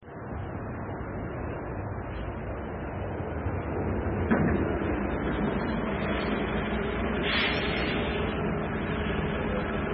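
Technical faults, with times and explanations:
Throughout: heavy MP3 compression, likely at a very low bitrate around 16 kbps. Nothing is heard above 5.6 kHz, so the top end sounds dull and cut off. Starved of bits, the encoder drops weak frequency lines frame to frame. This gives a watery, swirling texture and smeared attacks.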